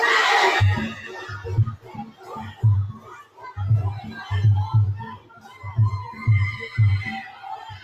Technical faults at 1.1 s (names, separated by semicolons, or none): noise suppressor applied to music or sounds; sound cut by the noise suppressor